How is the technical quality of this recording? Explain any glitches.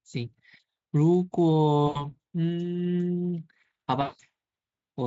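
The recording has two dropouts from VoIP packet loss concealed by the speech codec, with the Speex coding showing little or no damage of its own.

At 1.87 to 2.12 s and again at 4.01 to 4.21 s, packets went missing, about 80 ms and then 180 ms of audio. The decoder filled each gap by repeating its last pitch and filter with falling gain, so the sound smears into a buzzy tone or coloured noise that fades, and stays thin briefly after it resumes.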